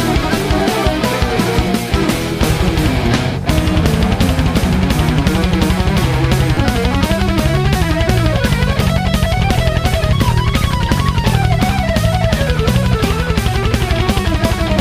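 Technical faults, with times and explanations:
1.67 s and 6.55–6.57 s, repeated buffer: late audio made an 11.6 ms chunk, fitting a 512-sample buffer, replay once, then twice, giving a click-buzz. The waveform shows identical copies, and the spectrogram shows vertical streaks at the hard joins.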